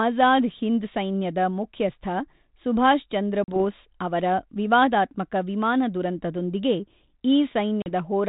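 At 3.44 s, after "ಹಿಂದ್ ಸೈನ್ಯದ ಮುಖ್ಯಸ್ಥ ಸುಭಾಷಚಂದ್ರ", and again at 7.82 s, there is packet loss on an ADPCM call. About 40 ms drops to hard-edged silence. The decoder's predictor loses step, so the speech returns with brief distortion.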